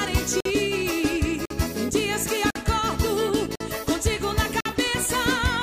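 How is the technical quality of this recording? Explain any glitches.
The recording has one recurring glitch: gaps between chunks, at 0.40–0.45, 1.45–1.50, 2.50–2.55, 3.55–3.60 and 4.60–4.65 s. The audio arrives in one-second chunks with 50 ms of silence inserted at each join, so nothing is lost but the sound stops abruptly, heard as regular hard-edged holes.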